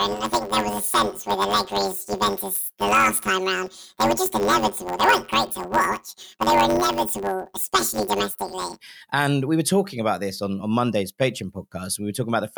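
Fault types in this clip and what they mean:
Planar audio read as interleaved: Each block stores all left samples and then all right samples, but the player takes them as alternating left-right pairs. So each block plays twice at double speed, left half first, then right half. Overall pace stays correct. Here the blocks last 10.67 ms, which fits a 512-sample buffer. From 0.0 to 8.8 s the speech carries a robotic buzz at 93.8 Hz, with no clear octave shift.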